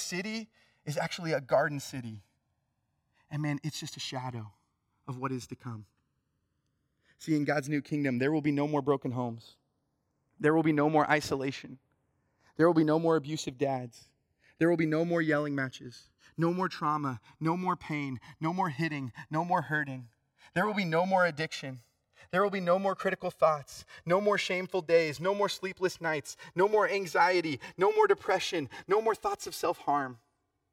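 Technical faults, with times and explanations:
Throughout, channels drifting apart: the two sides of this speech are captured on clocks that disagree by around 150 parts per million, so the offset between them creeps to about 3 ms by the end. Heard in mono, the resulting comb notches glide slowly downward through the spectrum as a gradual flanging sweep. Unlike a fixed inter-channel delay, whose coloration stays put, or a deliberate flanger, which oscillates back and forth, this sweep moves steadily one way.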